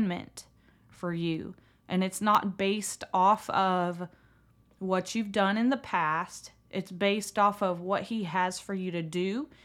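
Periodic USB or driver dropouts, 0.35 to 9.34 s: every second a stalled bus or driver silences a sliver of audio, leaving regular ticks.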